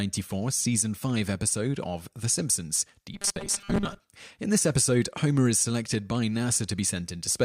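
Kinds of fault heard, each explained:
Robotic sound from repeated short buffers: at 3.14 to 4.0 s speech becomes a rigid 200 Hz metallic buzz, fitting a 5 ms buffer, likely replayed over about half that stretch.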